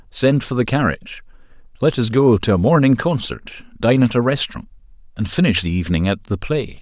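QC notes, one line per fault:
No faults heard anywhere in this speech recording.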